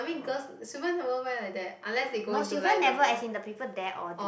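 Listening through the recording, nothing stood out as a technical problem at any point.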